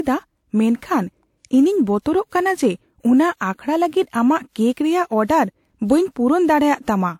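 It's a speech clip, and the whole thing carries the layered smear of transcoding between lossy codecs. It's likely been through an early WMA encode and then re-encoded as HE-AAC at a low rate, somewhere around 40 kbit/s. Nothing survives above 18.4 kHz. The second encoder wastes its bits re-coding the first one's artefacts and then adds its own, so you get two sets of codec grit stacked on each other from start to finish.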